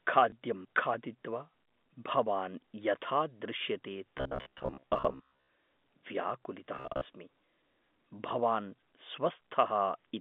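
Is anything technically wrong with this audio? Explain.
Yes, there are a couple of problems. Right near the start, from 0.30 to 0.32 s, there's packet loss with the last packet repeated: one 20 ms chunk went missing and the receiver just replayed the previous one. That comes across as a small blip.

Then from 4.18 to 5.50 s, and again from 6.76 to 7.06 s, there's a robotic sound from repeated short buffers. The audio turns into a stiff, metallic buzz at 66.8 Hz that still roughly tracks the speech. That's likely a playback path starving for data and looping roughly 15 ms buffers, which fits that buzz rate. Most of the first stretch and about half of the second is filled with repeats rather than real audio. All of this sits on top of the narrow telephone band you'd expect from G.711 coding.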